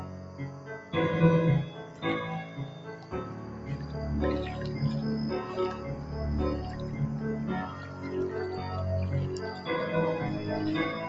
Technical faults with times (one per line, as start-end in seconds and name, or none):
0.00-11.09 noise suppressor applied to music or sounds
0.04-0.68 sound cut by the noise suppressor
1.85-2.02 sound cut by the noise suppressor
2.45-3.95 sound cut by the noise suppressor